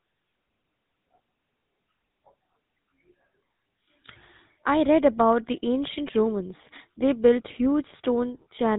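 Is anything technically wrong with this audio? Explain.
Yes, the whole clip has gone through the GSM full-rate codec, and the damage is plainly audible from start to finish. This old mobile codec models the vocal tract as a filter and drives it with a regularly spaced pulse train, keeping only every third sample of that excitation, which fits the 13 kbps full-rate mode. Nothing above 4 kHz survives, so the speech sounds muffled, with a buzzy, gravelly roughness laid over it.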